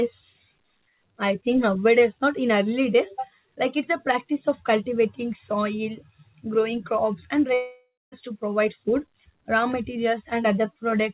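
Speech carried over a call path that cuts everything above 4 kHz, consistent with G.711 A-law, has a long network dropout, likely from lost packets, at 7.54–8.14 s: a fading concealment buzz that decays into silence, seen as smeared, thinning energy and then a flat, empty gap before the audio resumes.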